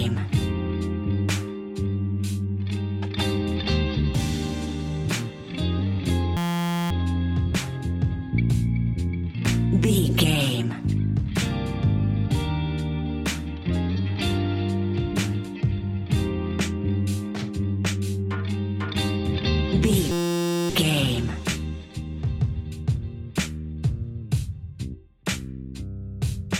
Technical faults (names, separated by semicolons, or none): system hang loop